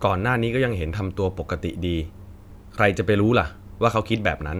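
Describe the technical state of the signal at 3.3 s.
At 3.3 s the speech signal is intact, with no dropout, distortion, glitch or other fault to be heard at that moment.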